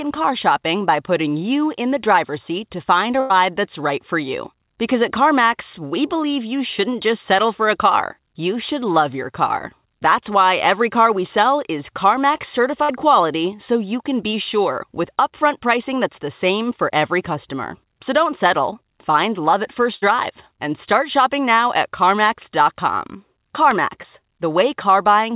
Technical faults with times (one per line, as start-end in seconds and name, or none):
3.20-3.32 burst of packet loss
12.84-12.91 burst of packet loss
19.95-20.15 burst of packet loss
23.71 bit error spike
24.02-24.06 short concealed packet loss